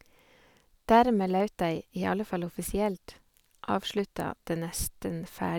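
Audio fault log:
0.11–5.28 s, clock drift buffer slips: about five short clicks recur every 1.29 s under the speech, each a jump where a handful of samples is dropped or repeated. Likely two independent clocks differing by roughly 150 ppm, periodically overfilling or emptying the buffer.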